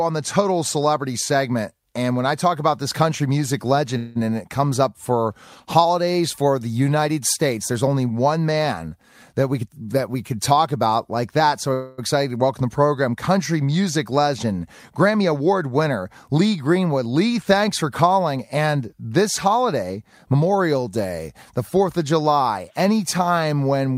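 A speech recording carrying two kinds of network playback fault. The first is a call audio freeze, heard twice: from 3.97 to 4.17 s, between "about this country music" and "and it comes up", and from 11.73 to 12.00 s. Each time the sound hangs on a fading buzz for about 180 ms and then 250 ms, and the talk resumes exactly where it stopped with nothing lost, just running later. The likely cause is delayed packets draining the jitter buffer, so the receiver stretched the last sound to fill the wait. On a spectrogram the frozen spans show flat horizontal streaks copying the final spectrum and dimming; the waveform shows a repetitive, decaying stretch. The second is a jitter buffer speed-up, at 9.03 to 10.99 s (after "there's only one man", before "like that"), 14.91 to 15.63 s and 18.37 to 20.50 s (after "thanks for"). The playback runs at 109%, 107% and 109% with pitch unchanged as the receiver trims small pitch-period slices to shed built-up delay: roughly a fifth of a second in the first and last spans, about 50 ms in the middle one. 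Speech sounds hurried there; the spectrogram keeps harmonic spacing but packs syllables closer, and waveform envelopes crowd together.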